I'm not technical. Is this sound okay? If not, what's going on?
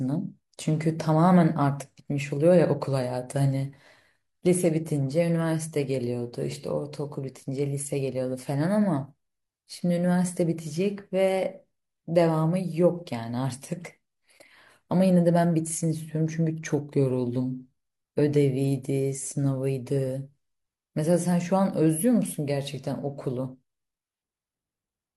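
Yes, nothing in this recording stood out as a problem when I listened to it.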